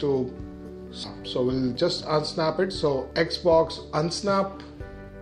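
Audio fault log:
1.03–1.05 s, skip ahead: About a second of sound is missing and nothing fills the gap. Playback jumps straight from the audio before the jump to audio that was already waiting in the buffer, so the two sides are joined almost directly. On the waveform there is an abrupt change in envelope with no silence between. On the spectrogram the harmonic or formant patterns change discontinuously across a single column, with no transition.
1.61–2.01 s, jitter buffer speed-up: The receiver held more sound than its target delay and trimmed the excess. It cut short slices about one pitch period long, many times in a row, removing about 40 ms in total. The result is playback at about 108% speed with pitch unchanged, so this stretch sounds slightly hurried. On the spectrogram the harmonic spacing stays constant while events crowd closer in time. On the waveform the periodic cycles are repeatedly spliced, with no gaps.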